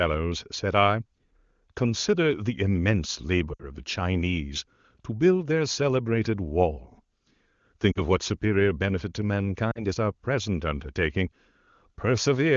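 A brief dip toward near silence in the speech at 3.53 to 3.63 s, then shorter dips at 7.92 to 7.99 s and 9.72 to 9.80 s. These are lost AMR speech frames: the wideband decoder bridged 60 ms and 40 ms gaps with repeated, fading parameters.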